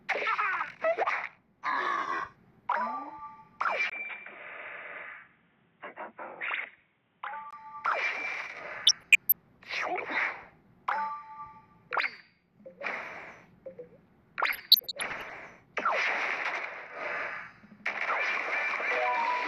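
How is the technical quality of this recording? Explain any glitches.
Three distinct glitches affect the technical quality: one stretch where the pickup changes character, and two bursts of digital-radio damage.

From 3.90 to 7.53 s the sound narrows abruptly, with nothing above 3.8 kHz, after a 20 ms gap. The level drops by roughly 5 dB, and a new background noise appears well below the signal. This is most likely an input switched to a poorer device, such as another microphone or a headset call profile with a narrower band. Unlike a simple low-pass filter, the switch brings its own noise floor, level shift and silent seam, and at 7.53 s the full band returns just as suddenly.

From 8.76 to 9.36 s and again from 14.48 to 15.32 s there is DAB burbling. Weak reception lets bit errors slip past error correction into the MP2 data, so corrupted samples put short blips of noise in single sub-bands, and corrupted scale factors make sub-bands jump in level for up to a frame. 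The result is a burbling of noise blips and level jumps laid over the programme, heavier in the second burst, which reflects a higher error rate. Unlike dropouts, the audio keeps running rather than going silent, and the damage sounds spectrally patchy rather than like a clean gap.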